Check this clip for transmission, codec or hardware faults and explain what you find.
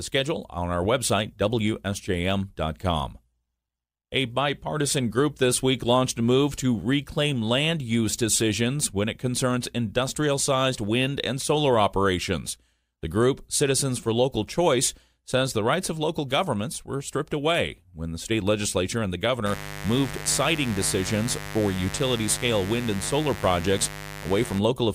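A hardware interference fault is present. From 19.46 s to 24.59 s, right after "state legislature and the", a steady raspy mains buzz sits only about 10 dB below the speech. Switching spikes twice per 50 Hz cycle leak in, spraying harmonics up to several kHz.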